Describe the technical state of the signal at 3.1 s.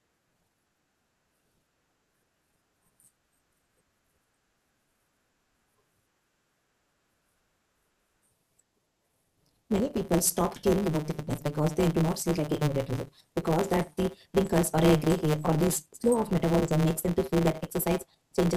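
At 3.1 s the speech carries a block size mismatch (truncated). It is present across the whole clip, not just at this moment. One stage writes longer blocks than the next stage reads, so the tail of every block is dropped. The pattern fits 512-sample blocks cut down to about 320. The seams produce a steady buzz at 150 Hz. The speech also runs 1.6 times too fast, while its timbre stays the same.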